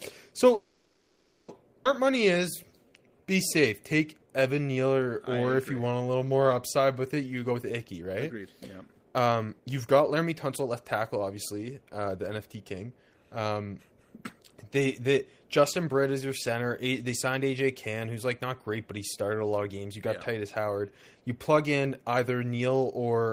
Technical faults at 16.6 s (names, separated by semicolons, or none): none